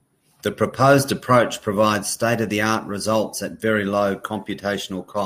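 Nothing in this speech recording stands out as a technical fault; there's nothing to flag anywhere along it.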